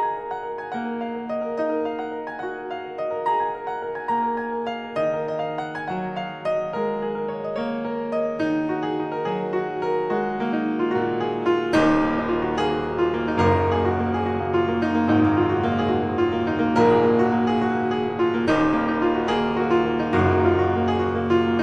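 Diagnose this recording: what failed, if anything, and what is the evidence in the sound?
Nothing in the signal chain points to a failure; no stage shows any audible evidence of a fault.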